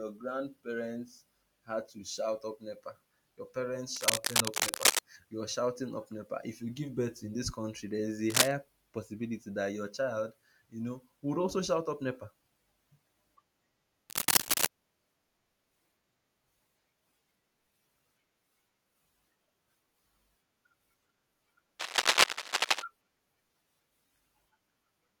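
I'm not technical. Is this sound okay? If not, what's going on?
No, not quite. There's cable scratch noise: short bursts of scratchy, rustling crackle over the speech at 3.96 to 5.0 s, 8.3 to 8.53 s (the harshest one), 14.09 to 14.66 s and 21.79 to 22.83 s. It's likely a worn cable or plug getting jiggled.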